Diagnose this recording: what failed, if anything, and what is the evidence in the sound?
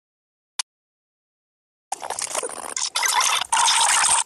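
Audio dropout to silence from 0.61 s to 1.92 s: the sound cuts off abruptly and returns mid-flow, leaving about 1.31 s of silence with no room tone. That points to a break at the input stage, likely a lost device or link, while the recorder kept writing samples.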